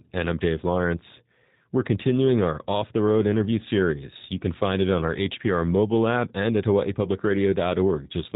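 Speech passed through a G.729 codec for its whole length, a low-rate VoIP coder rebuilding each frame from a vocal tract model, pitch prediction and sparse pulses, which fits 8 kbit/s. Nothing above about 4 kHz survives, and the speech sounds plainly rough and synthetic throughout.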